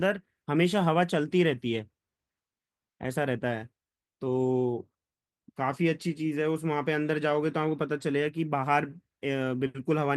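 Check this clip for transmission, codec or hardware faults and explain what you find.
Nothing faulty can be heard anywhere in this recording.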